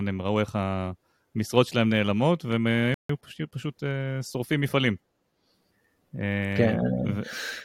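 At 2.94 s the player exhausted its store of downloaded audio and had to halt playback until more data came in, a rebuffering stall. The speech drops abruptly into silence and stays there until 3.09 s, then picks up at precisely the point where it broke off. No audio is skipped or repeated; the gap simply inserts about 0.15 s of dead air, so the flow of speech is stretched by that much.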